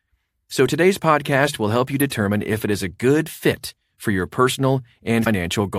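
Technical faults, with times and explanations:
2.00 s and 5.21–5.27 s, damaged data in a compressed stream: Brief blips interrupt the speech, the first between "podcast will help you" and "if it is a". Corrupted bytes garble those frames. The decoder loses sync and resumes at the next valid frame header.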